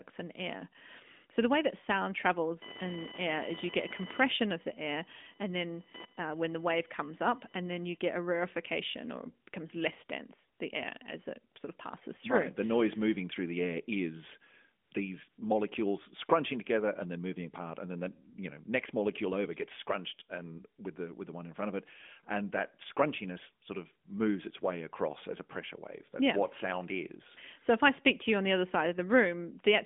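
From 2.62 to 7.97 s, computer activity noise rides under the speech at roughly 10 dB below it. It is a buzzing, chirping whine pulsing at around 1 kHz. The processor, graphics or mouse load is shifting the audio circuit's shared ground. Unlike mains hum, which holds a steady low pitch, this noise follows the machine's workload rather than the sound, so it stutters and changes texture while the speech carries on unaffected.

AMR comfort noise appears four times. There are brief 20 ms gaps at 10.58 s and 11.54 s, then longer 80 ms gaps from 14.84 to 14.92 s and from 15.30 to 15.38 s. The phone judged these moments silent and stopped sending speech frames, so the receiver patched in synthetic noise. The real background drops out and a smooth, featureless hiss switches in, all within the 200 Hz to 3.6 kHz band of the 12.2 kbps narrowband link. Packet-loss concealment would instead smear or repeat the preceding sound.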